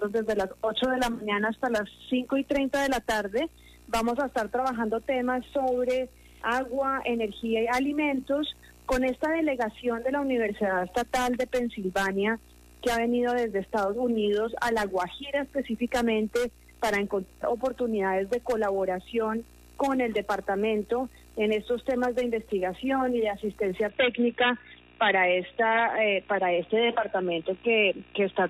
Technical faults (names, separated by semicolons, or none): input switched to a poorer device